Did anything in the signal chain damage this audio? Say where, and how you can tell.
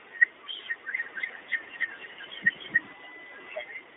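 Yes. At the codec stage, iLBC coding runs through the whole clip: nothing passes above about 3.8 kHz, the line band sits near 300 Hz to 3.6 kHz, and the speech has a plainly rough, synthetic edge. That edge comes from coding each 20 ms frame's excitation independently, and it distinguishes this from simple telephone band-limiting.

From 0.97 s to 2.93 s there is a doubled audio track: a second full-band copy trails roughly a third of a second behind at about the same level. Unlike an echo or reverb, it has no decay or room colour and starts and stops abruptly, likely from a duplicate capture path or an edit.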